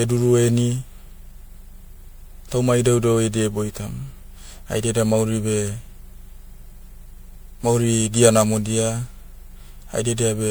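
From start to end the speech carries generation loss. It sounds swirly and hollow, with a smeared texture and blurred consonant attacks. There is no content above about 20.9 kHz. The damage is worse than one pass at a bitrate near 128 kbit/s would leave. The likely cause is repeated MP3 coding, around seven times. Each decode and re-encode quantised the sound again on a shifted frame grid, so noise and spectral gaps accumulated.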